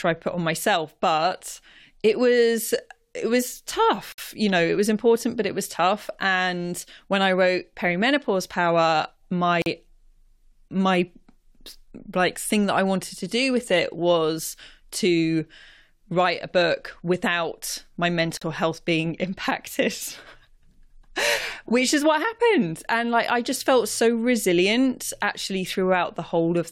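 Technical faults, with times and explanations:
4.12 s, 9.62 s and 18.37 s, gap at a join of encoded pieces: the speech drops out for about 58 ms after "it was it was", then 42 ms, then 43 ms between "a book without my" and "health being", resuming exactly where it stopped. Each piece was encoded separately and joined untrimmed, so encoder start delay and last-frame padding remain as silence. On a waveform these show as flat gaps with abrupt, slightly smeared edges; on a spectrogram, thin empty vertical bands across all frequencies.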